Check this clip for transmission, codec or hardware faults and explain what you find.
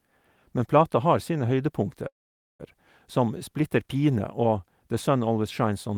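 One fault stands out: a call audio freeze from 2.07 to 2.61 s. The speech halts, a short fading tail of the last sound gives way to about 0.49 s of silence, and then it resumes exactly where it stopped. Nothing is lost, but everything after runs roughly 0.52 s late, likely because delayed packets let the receiver's jitter buffer run dry.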